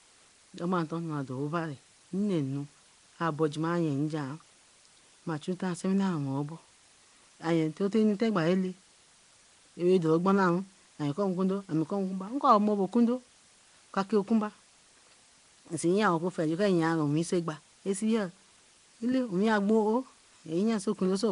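From start to end, a constant, even hiss sits around 30 dB below the speech. That points to low bit depth with dither, consistent with about 8 bits. Dither turns rounding error into steady white noise, so unlike plain truncation it brings no gritty distortion that comes and goes with level.

Throughout, the speech also has a rough, hissy halo and a smeared, underwater quality, and nothing is present above 10.6 kHz. This plainly audible damage is likely Nellymoser compression at a rate near 44 kbps. The codec fills weak bands with noise, so this haze changes with the speech rather than staying fixed like the dither hiss.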